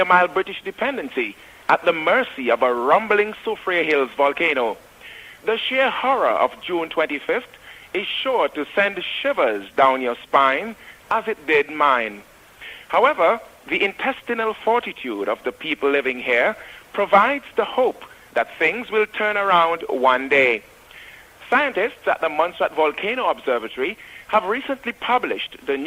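No technical faults can be heard anywhere in this recording.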